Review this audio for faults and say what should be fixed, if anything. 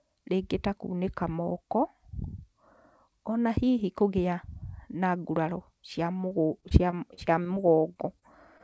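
From 6.18 to 7.58 s the speech turns choppy and robotic, with pieces missing. This is repeated packet loss: nine gaps, none longer than 29 ms, each patched by extending the last sound, with about 11% of that stretch concealed. A steadier network route or a deeper jitter buffer would prevent it.

Brief smears or wobbles occur at 7.94–7.97 s, 8.19–8.24 s and 8.58–8.61 s. Each is a short concealed packet loss: about 20 ms of audio arrived too late, so the receiver synthesized a continuation and blended back in. Forward error correction or a larger jitter buffer would cover such isolated drops.

The call path's band limit at 8 kHz, which points to G.722, is expected and is not a fault.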